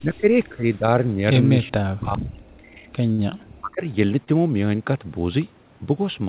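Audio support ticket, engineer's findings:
Speech suppressed in double talk, 0.00 to 2.83 s. Level pumps down repeatedly, deepest dips about 40 dB, around 2 s of speech affected in total. Likely cause: echo canceller misreading simultaneous talk as loudspeaker echo and attenuating the near end. Repeats 3.52 to 3.84 s, a shorter dip of similar depth, roughly 0.3 s. Fragmented, ducked speech, not dropouts from the network.

Short stall from a late packet, 3.12 to 3.21 s. Jitter buffer underrun. Receiver held the last sound for 64 ms, then resumed where it left off. Nothing lost, but playout delay grew by 64 ms. Again at 4.24 to 4.32 s: 26 ms stretch plus 6 ms added. Audible as a smeared, held sound. Band limit near 4 kHz from the narrowband call codec.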